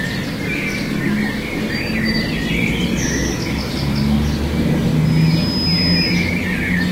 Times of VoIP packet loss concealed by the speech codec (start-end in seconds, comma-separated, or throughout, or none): none